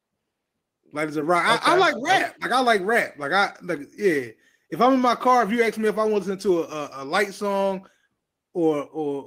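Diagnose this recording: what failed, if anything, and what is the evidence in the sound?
Nothing failed here, and no stage of the chain leaves an audible fault in this speech recording. There is no evidence in the sound that points to a breakdown anywhere.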